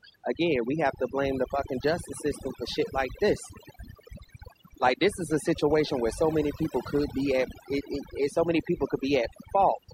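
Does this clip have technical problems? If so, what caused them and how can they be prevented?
Yes. Overdone noise removal runs throughout. Bands near the noise estimate are cut hard, taking quiet speech along. The background breaks into twinkling, warbling specks. Use gentler noise reduction settings to prevent it.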